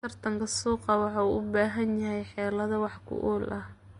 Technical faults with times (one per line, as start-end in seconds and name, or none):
0.00-3.99 Vorbis compression